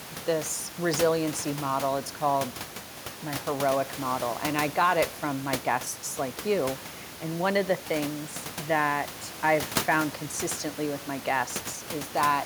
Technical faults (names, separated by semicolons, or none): none